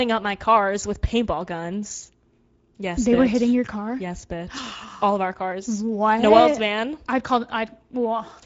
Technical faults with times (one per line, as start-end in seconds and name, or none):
0.00-8.46 Speex codec